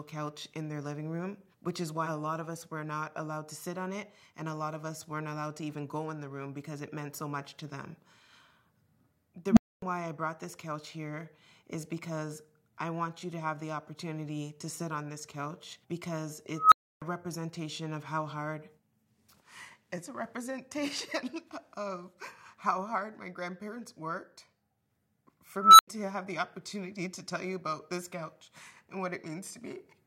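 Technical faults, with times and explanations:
9.48 to 9.82 s, unstable filter: a recursive filter's feedback ran away. A low tone around 200 Hz swells over 0.08 s into a loud clipped drone. The values then overflow and the output drops to silence for 0.26 s before the filter resets.
16.54 to 17.02 s, unstable filter: the same runaway feedback, this time at a high pitch around 1.5 kHz. It builds over 0.18 s into a piercing squeal, then cuts to 0.3 s of silence.
25.57 to 25.88 s, unstable filter: a squeal around 1.5 kHz grows over 0.22 s, clips, and breaks off into a brief 0.09 s gap.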